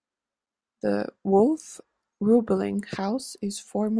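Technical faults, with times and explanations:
No technical faults are audible; the speech signal comes through intact and steady over its whole duration.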